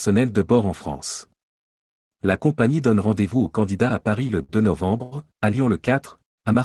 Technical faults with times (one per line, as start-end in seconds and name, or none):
4.27-4.51 short stall from a late packet
5.03-5.14 short stall from a late packet
6.25-6.40 call audio freeze